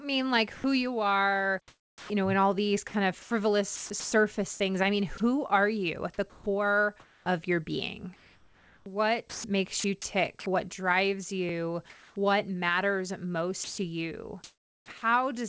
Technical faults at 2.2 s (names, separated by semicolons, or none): sound chopped by the voice detector